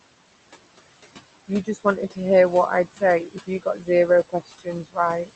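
A speech recording carried over a call path where the noise suppressor pulls the room noise down by about 19 dB frame by frame. The background, which sits about 13 dB under the voice, therefore drops away in pauses and swells back beneath speech. The top end rolls off near 8 kHz, consistent with a wideband Opus call. The suppressor also mistakes parts of the speech for noise, cutting speech at 1.48–1.85 s (about 17 dB), 3.27–3.89 s (about 16 dB, the longest, around a third of a second affected), 4.29–4.67 s (about 16 dB) and 4.83–4.98 s (about 21 dB), where soft sounds and word endings come out swallowed or faint.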